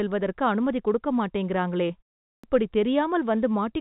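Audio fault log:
1.88–1.91 s, short concealed packet loss: about 20 ms of the call arrived too late for the decoder, so the receiver patched the gap by carrying the last bit of sound forward for roughly 14 ms and then blending back into the real stream for the rest. You hear it as a quick smear or wobble in the speech, the kind of blip where a short consonant can go missing, riding on top of the narrow phone-line sound with nothing above 4 kHz.
2.37–2.44 s, clipped start after a pause: after a pause of about 0.43 s, the playback side had dozed off and needed time to wake up and lock on again, so the first 65 ms of the next stretch of speech never came out. The word lurches in abruptly out of silence with its opening sounds shaved off, rather than building up naturally from its first consonant or vowel.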